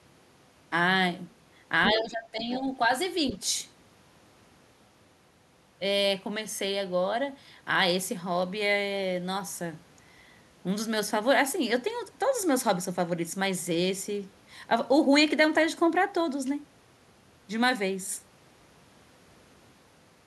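Other side's voice leaking through at 1.85 to 1.93 s: a brief second voice sits only a little below the talker, around 5 dB down. The likely cause is loudspeaker playback picked up by the microphone and not fully removed by the echo canceller.

Speech suppressed in double talk, from 1.88 to 2.67 s: the talker's level dips in pieces, by as much as roughly 15 dB and for about half a second in total. This is likely the canceller ducking everything while both sides spoke at once.

Within that stretch, at 2.39 to 2.58 s, the other side's voice leaks through again, fainter at roughly 15 dB below the speech. A last short scrap of it appears at 3.29 to 3.33 s, at a similar low level.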